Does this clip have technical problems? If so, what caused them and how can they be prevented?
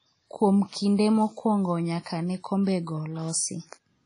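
Yes. Throughout the speech there is plainly audible washy, ringing smearing, a hiss that rises and falls with the signal, and nothing above about 10.1 kHz, most likely WMA compression at a low bitrate, around 32 kbps. Unlike a plain low-pass filter, the wash tracks each sound. Prevent it by encoding at a higher bitrate or keeping a lossless master.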